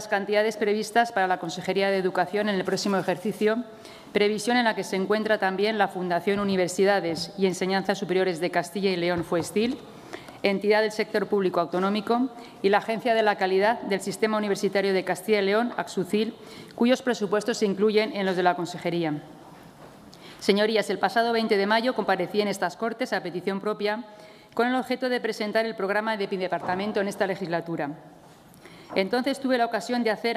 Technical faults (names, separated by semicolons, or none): none